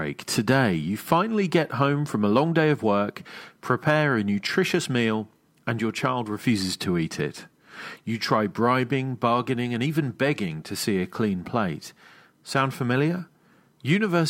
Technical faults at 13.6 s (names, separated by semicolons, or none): none